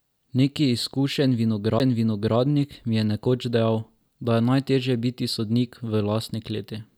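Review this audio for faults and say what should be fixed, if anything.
A CD skip occurs at 1.79 s: the laser lost its track and landed on a different turn of the spiral, so playback mutes very briefly, leaving a tick, then resumes from another point and the speech jumps abruptly. Prevent it by isolating the player from vibration and using a clean, undamaged disc.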